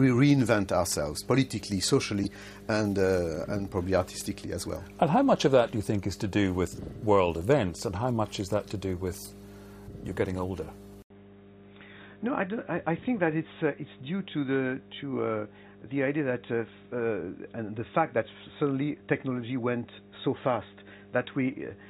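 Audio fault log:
throughout, mains hum. A steady low tone at 50 Hz sits under the whole recording, at about 20 dB below the signal. Power-line current has leaked into the signal path, most often through a ground loop or a nearby transformer. The tone does not change because the mains frequency is fixed. It adds a constant drone beneath everything else.
2.23 to 2.27 s, corrupt frame decoded. A brief, harsh burst lasting about 40 ms cuts across the sound. It peaks at around -20 dBFS. Damaged bits inside a few compressed frames were decoded as if they were valid. The decoder then put energy at the wrong frequencies and gains. The result is a short chirp-like blip. It lasts only as long as the frames that were hit.
11.02 s to the end, input switched to a poorer device. The sound stops for about 80 ms. It then returns duller and boxier, with nothing above 3.8 kHz. The level also falls by about 5 dB. 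A new background noise sits roughly 40 dB below the signal. This is likely a change of input in mid-recording to a narrower-band microphone or headset path. Its own bandwidth, level and noise floor take over from that point.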